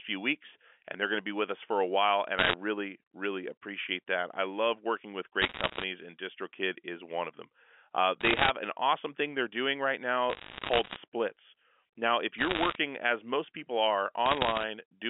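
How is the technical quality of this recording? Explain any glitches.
The recording has short bursts of crackle over the speech, carried on a narrowband phone line. Those bursts are bit errors on a digital phone line, at 2.38–2.54, 5.42–5.84, 8.21–8.50, 10.30–10.96, 12.38–12.76 and 14.26–14.63 s. Roughly one or two percent of bits flip, and each flip corrupts one sample. When a sign or high-order bit gets hit, you hear a sharp tick. Packed together, those ticks sound like crackle sitting on top of speech that's otherwise unchanged.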